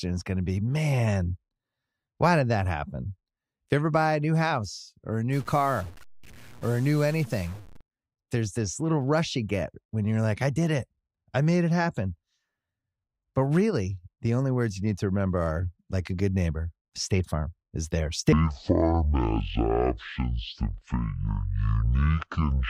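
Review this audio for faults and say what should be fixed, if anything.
From 5.33 to 7.81 s the speech turns distorted, and noise fills the pauses. A stuck bit, likely from a faulty data line or converter, corrupts about half of the samples. Check the converter wiring and run a bit-pattern test on the capture chain.

From 18.32 s to the end at 22.69 s, a section at the wrong speed plays at about half speed. Pitch drops about ten semitones and the speech drags. This is likely from resampling or playback against the wrong clock. Keep sample-rate settings consistent across the editor and player.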